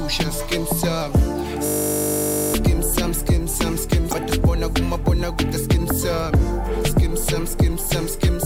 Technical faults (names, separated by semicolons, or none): system hang loop; damaged data in a compressed stream